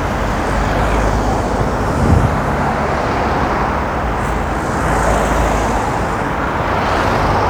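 Nothing stood out on listening to this recording of everyday sounds.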